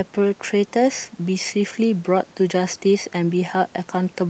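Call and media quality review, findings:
No faults found in the speech; content stops near 8 kHz, consistent with the Opus call path at 32 kbps, with room noise about 33 dB below the speech.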